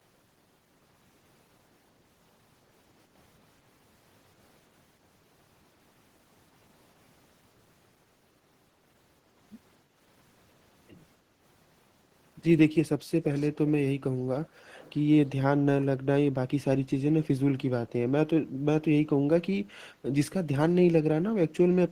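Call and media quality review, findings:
Background gated by the echo canceller, 9.85–9.96 s. Room noise dips about 6 dB for roughly a tenth of a second, then recovers. Component: echo canceller at the far end during loudspeaker playback. Mechanism: its suppressor pulled microphone gain down hard, taking the background with it.

Echo leak, 13.23–13.5 s, 14.44–14.49 s, 14.73–14.93 s. Faint delayed copy of speech trailing by 335 ms. Scraps sit about 20, 35 and 25 dB below the direct speech. Likely cause: loudspeaker echo on the far side that the canceller did not fully remove and sent back.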